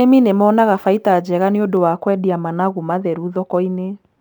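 A speech recording that turns dull and muffled from 1.77 s to the end, the signature of de-emphasis applied wrongly: a treble-cutting curve meant to reverse pre-emphasis was applied where none existed, or applied a second time. The high end slopes away gradually, reaching about 13 dB down at 10 kHz relative to 1 kHz. A low-pass filter would instead drop off sharply above a cutoff; here the loss is a smooth, continuous tilt.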